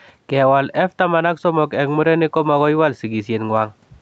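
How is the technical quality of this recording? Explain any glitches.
There's one issue: gain pumping runs through the whole clip, with the speech band topping out around 8 kHz. Throughout, the gain swings by roughly 5 dB, pulling down under louder speech, likely an over-hot input slammed by a fast limiter.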